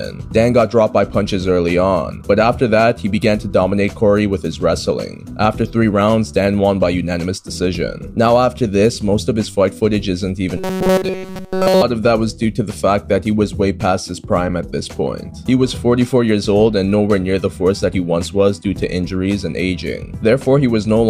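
From 10.57 to 11.83 s the sound turns into a rigid, metallic buzz pitched at 188 Hz, with essentially the whole stretch affected. This is robotic sound from repeated short buffers, likely caused by audio arriving too seldom, so a roughly 5.3 ms fragment loops in its place.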